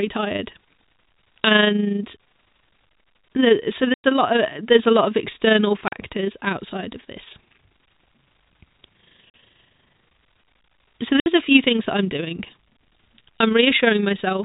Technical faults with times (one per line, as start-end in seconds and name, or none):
3.94-4.04 packet loss filled with silence
5.88-5.92 packet loss filled with silence
9.30-9.34 packet loss filled with silence
11.20-11.26 packet loss filled with silence